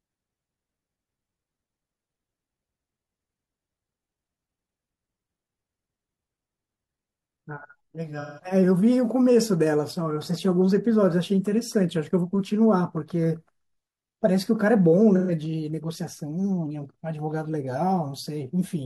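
At 8.20 to 8.44 s and again at 15.15 to 15.32 s, AAC frame loss with concealment smears the speech into a phasey, noisy patch as the decoder reuses the last good spectrum, which fits roughly four and three lost frames. Unlike a dropout, it stays sound-filled rather than silent.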